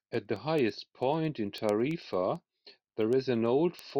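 A speech recording carries a steady train of sharp ticks from 0.14 s to 3.90 s, about ten per second and around forty in all, some crisper than others. These are word clock ticks: the receiving device runs on its own clock rather than locking to the sender's digital link, and the two drift apart by roughly 200 parts per million. Each time they slip past each other, a sample is dropped or repeated, which fits single-sample slips.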